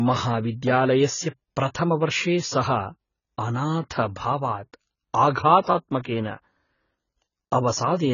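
Throughout, the speech sounds dull and smeared, with nothing above 7 kHz and fizzy sibilants, likely heavy AAC compression at a very low bitrate.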